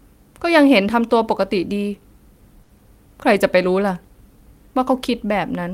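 A short stall from a late packet runs from 2.63 to 2.71 s. A packet arrived after its due time, the jitter buffer emptied, and the receiver held the last speech sound for about 60 ms before resuming where it left off. Nothing is lost, but the sound drags with a faint buzz or dip, and playback now sits about 60 ms later.

Short concealed packet loss follows at 2.77 to 2.80 s. Roughly 20 ms of speech never reached the decoder, and about 10 ms of extrapolated sound was generated from what came just before and blended back in. It comes across as a quick smear or wobble, and a brief consonant there can drop out.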